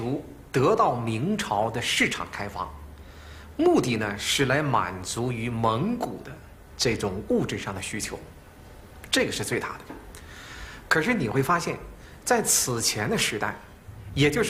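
No faults are audible anywhere in this recording.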